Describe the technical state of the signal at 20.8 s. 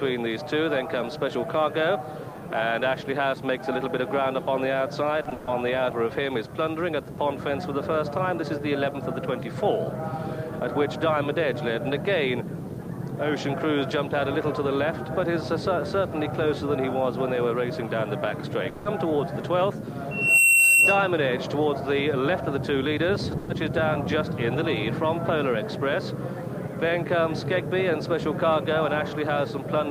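At 20.8 s a loudspeaker feedback squeal is sounding, from 20.11 to 21.13 s. The microphone re-amplifies its own loudspeaker, so a 2.7 kHz tone swells within about a third of a second to around 10 dB above the audio. On a spectrogram it shows as one bright horizontal line.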